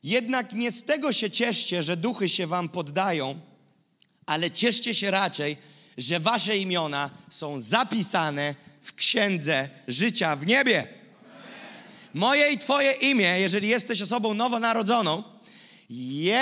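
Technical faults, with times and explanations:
No technical faults can be heard anywhere in this clip.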